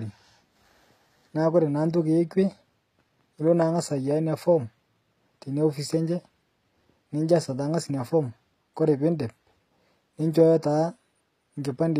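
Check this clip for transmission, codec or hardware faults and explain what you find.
One codec fault runs through the whole speech clip. HE-AAC compression is the likely cause, consistent with about 24 kbps: the lower spectrum is coded, the treble up to 14.9 kHz is rebuilt from copied bands, and s sounds come out gritty and lispy rather than muffled, unlike a plain low-pass cut.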